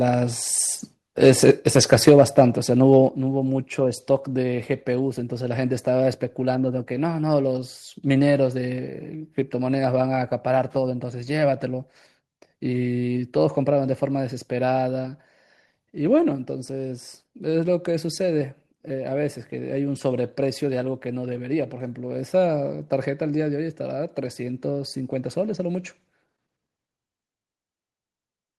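At 2.93 to 2.97 s the loudest syllable of the speech takes on a short, harsh crackle with a flattened, gritty edge. This is microphone overload: the input level was likely set too high, so the peaks ran about 1 dB past the converter's ceiling and their tops were sliced off. Only a small share of samples, around two percent, hit the limit, which is why the distortion is brief and confined to that one peak.

At 3.09 s, just after that distorted peak, the whole signal drops abruptly by about 5 dB, voice and background together, in a single step with no fade. This is the microphone volume stepped down. The call software likely detected the clipping and cut the device's input gain in one move. The speech then sounds quieter.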